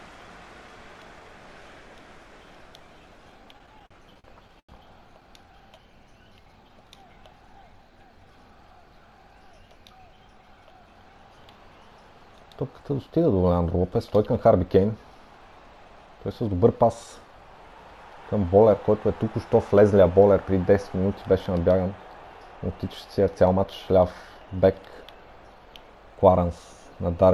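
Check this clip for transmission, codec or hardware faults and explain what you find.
Two kinds of fault are present: one burst of stutter early on and four later stretches where the audio is briefly sped up.

Repeated stalls (stutter), 3.45 to 4.71 s: packets arrived late, so the jitter buffer ran dry 11 times. The receiver extended the last sound each time, about 253 ms in total and up to 89 ms at once, roughly a fifth of that span. Nothing is lost, but the sound drags and stutters.

Jitter buffer speed-up, at 15.70 to 16.08 s, 19.81 to 20.49 s, 22.90 to 23.65 s and 26.01 to 26.45 s: with excess audio queued, the receiver repeatedly cut out short pitch-period pieces, around 40, 70, 100 and 50 ms respectively. Each stretch runs at 110 to 111% speed with unchanged pitch and sounds hurried.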